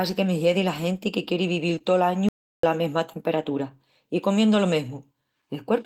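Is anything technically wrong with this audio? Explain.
Yes. There are two distinct faults in this speech recording.

From 1.75 to 1.82 s there is short concealed packet loss: two consecutive 20 ms stretches, at 1.75 s and 1.79 s, arrived too late for the decoder. The receiver covered each hole by extending the preceding sound, pitched continuation where the speech was voiced and shaped noise where it wasn't, before crossfading back. The result is a brief smeared, warbling patch lasting about 60 ms.

From 2.29 to 2.63 s there is an audio dropout to silence lasting about 0.35 s. The signal falls to silence with no room tone underneath, then resumes abruptly mid-flow. Whatever was spoken in that interval is simply absent. The most likely cause is the input path being lost briefly, such as a momentary disconnection, while the recorder kept writing empty samples.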